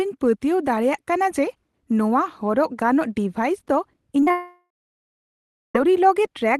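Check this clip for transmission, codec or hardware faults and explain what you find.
The clip has two kinds of fault, both around the same moment, in speech carried over a WebRTC call path whose top end stops near 12 kHz.

Short concealed packet loss hits at 4.21 s, from 4.24 to 4.28 s, and from 4.29 to 4.31 s. The decoder patched each gap by extending the previous sound, leaving brief smears.

A long network dropout follows from 4.31 to 5.76 s. The sound fades out as a buzz or hiss, then about a second of silence follows. Missing packets are the likely cause.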